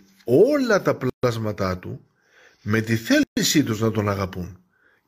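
At 1.10 to 1.23 s, just after "όλα τα", and again at 3.23 to 3.37 s, between "με τη" and "τους να", the speech breaks off for about 136 ms. These are gaps at a join of encoded pieces, 2 s apart, where separately encoded chunks were butted together with each encoder's start delay and final-frame padding left in. Unlike a dropout, nothing is lost: the speech resumes exactly where it stopped, after smeared edges.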